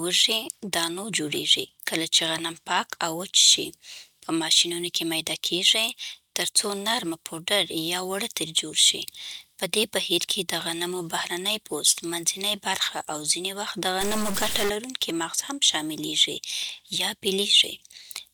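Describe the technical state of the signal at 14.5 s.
At 14.5 s the speech carries a stuck-bit fault, running from 14.01 to 14.70 s, between "او ځینې وخت د" and "لرونکی مغز هم شاملېږي". It sounds harsh and buzzy, like coarse distortion riding on the waveform. The likely cause is one data bit held fixed by a broken line or converter. Roughly half the samples are then pushed off by a step of about -25 dBFS, in a pattern that follows the signal's shape.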